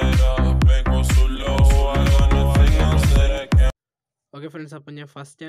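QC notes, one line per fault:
1.40–3.38 s, doubled audio track: likely a second, slower capture path mixing in, adding a full-band copy about 0.7 s late and roughly 5 dB quieter, starting and stopping abruptly.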